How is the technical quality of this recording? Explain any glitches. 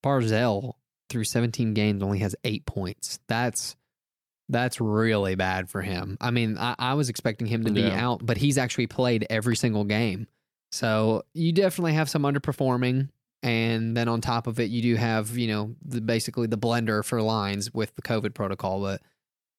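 One glitch stands out: a single loud pop from 9.52 to 9.54 s, right after "he's actually played every" and just before "single game". It is a sharp, very brief click-thump peaking a few decibels above the speech, while the talking carries on underneath without a gap. The likely cause is a sudden voltage step or pulse, from a plug, switch, static discharge or driver glitch, entering the signal path. The downstream circuitry shapes it into this one percussive burst. Because nothing is missing and the speech continues underneath, it is an added pulse rather than a dropout, which would instead cut the sound out briefly.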